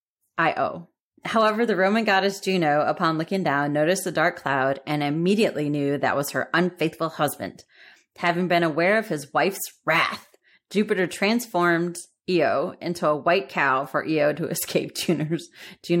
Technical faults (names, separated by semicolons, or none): none